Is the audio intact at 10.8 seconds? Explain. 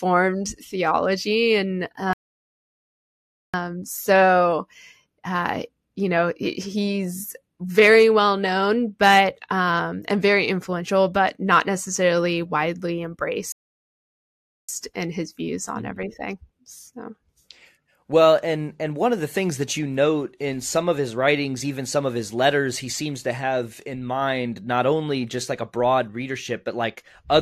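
Yes, the audio is intact at 10.8 seconds, with no fault to be heard at that moment.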